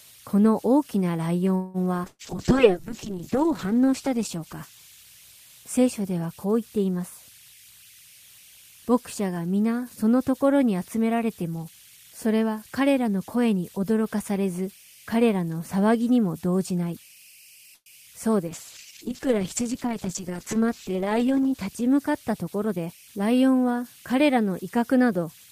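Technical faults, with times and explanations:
Throughout: converter idle tones. A faint whistle near 3 kHz, about 28 dB below the speech, sits in pauses and adds grain to quiet passages; an undithered delta-sigma converter cycles through repeating bit patterns.
1.55 to 1.85 s: call audio freeze. The last sound stretches into a fading buzz for about 188 ms, then speech continues intact but later, likely because delayed packets drained the jitter buffer.
2.08 to 2.22 s: burst of packet loss. About 110 ms of decaying concealment and 30 ms of silence replace 120 ms of lost audio, so speech jumps ahead afterward.
2.08 to 6.17 s: call bitrate drop. The encoder falls from 32 to 7 kbps, lowest for about a second, making speech rough, watery and muffled as high frequencies are cut.
11.69 to 13.53 s: jitter buffer speed-up. Speech runs about 9% fast at unchanged pitch, hurried, as pitch-period slices totalling about 150 ms are trimmed to shrink excess buffering.
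17.74 to 17.89 s: call audio freeze. A short fading fill of about 118 ms, including 40 ms of silence, pauses speech, likely from held-up packets, before it resumes intact.
18.47 to 22.68 s: call bitrate drop. Bitrate falls from 32 to 9 kbps, bottoming out for about 2.6 s, so speech turns coarse and dull with its high end removed.
22.60 to 22.98 s: jitter buffer speed-up. About 40 ms of pitch periods are removed, so speech briefly runs about 8% faster at the same pitch while the buffer shortens.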